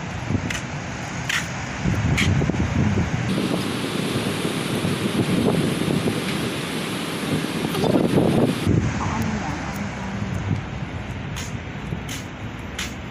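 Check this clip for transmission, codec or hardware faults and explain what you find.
One fault stands out: a section at the wrong speed. From 3.29 s to 8.67 s the audio runs about 1.62 times too fast. Pitch rises with it, by roughly seven semitones. The change is abrupt at both ends. Everything in that stretch sounds high, thin and hurried, then drops back to normal. The likely cause is playback or editing against a mismatched clock, so samples are read out faster than they were captured.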